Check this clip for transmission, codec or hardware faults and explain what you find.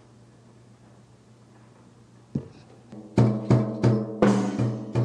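Nothing in the clip points to a fault. There is nothing to report at any point in it.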